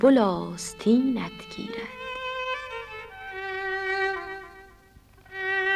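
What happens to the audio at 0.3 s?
Nothing goes wrong at 0.3 s; the audio is intact there, with no dropout, click or distortion at that point.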